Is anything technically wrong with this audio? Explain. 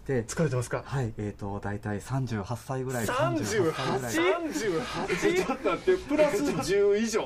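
Yes. From 3.04 s to 6.72 s there is a doubled audio track: a second, full-band copy of the sound trails the original by about a second, a few dB quieter. It likely comes from the same signal being captured again through a slower path and mixed back in. The copy has no decay or room colour, and it starts and stops abruptly. On a spectrogram, each pattern reappears about a second later, slightly fainter. On the waveform, shapes are duplicated at that offset.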